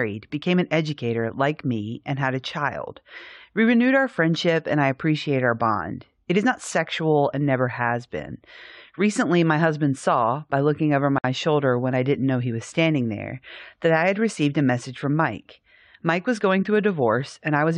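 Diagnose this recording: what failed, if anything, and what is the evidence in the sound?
The failure is at the codec stage: a gap at a join of encoded pieces. At 11.18 s, right after "saw by looking over", the speech drops into about 57 ms of silence with smeared edges, then resumes at "shoulder when I didn't" exactly where it left off. The pieces were encoded separately and joined untrimmed, so the encoder's start-up delay and the padding of the last frame both remain in the file.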